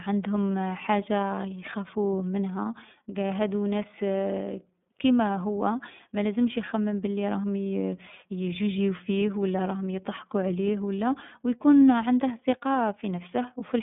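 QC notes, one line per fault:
Throughout: iLBC codec. Nothing above 3.8 kHz, and the band sits at roughly 150 Hz to 3.6 kHz, so the speech sounds narrow and telephone-like. Each frame's excitation is coded independently, leaving a plainly audible rough, synthetic grain. This fits the 30 ms, 13.33 kbps mode.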